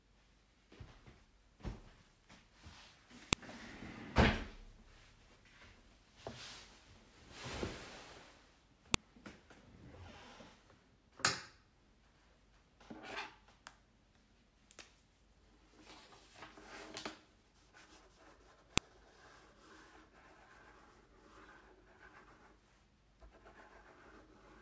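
At 3.33, 8.94 and 18.78 s there's a sharp, loud snap, the file header played as audio. Separate WAV pieces were joined without stripping their headers, so those few dozen bytes play back as samples and crack out regardless of the surrounding sound.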